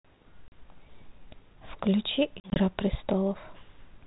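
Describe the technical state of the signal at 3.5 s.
At 3.5 s the signal is intact, with only the mild band-limited grain of a 32 kbit/s G.726 ADPCM telephone path working as it should.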